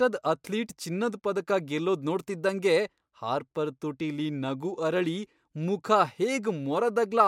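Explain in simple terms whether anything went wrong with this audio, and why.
Listening through this speech recording, nothing stood out as having gone wrong.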